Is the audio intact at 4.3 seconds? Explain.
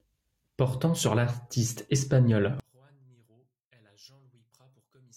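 No. From 2.60 s, right after "sur l'artiste espagnol", to the end at 5.17 s, the sound behaves like one channel inverted: the likely cause is one stereo side having its polarity reversed, so when the two sides are summed to mono the centred speech cancels against itself. At 4.3 s the voice has dropped by about 37 dB, leaving only a faint residue of the small differences between the channels.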